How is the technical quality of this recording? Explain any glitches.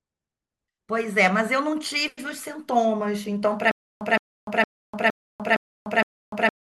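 The recording breaks down near the end. From 3.71 s to the end, a likely playback stall causes stutter with silent gaps: a 166 ms fragment repeats six times, each followed by about 296 ms of digital silence.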